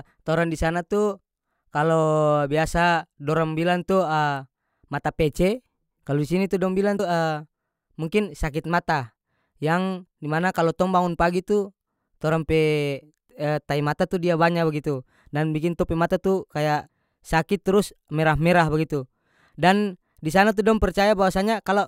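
Audio missing between chunks at 6.99 s: the speech jumps forward abruptly, with about a tenth of a second gone and the two sides butted together without a gap. The likely cause is a recorder working in 10-second chunks that drops a short piece while switching between them.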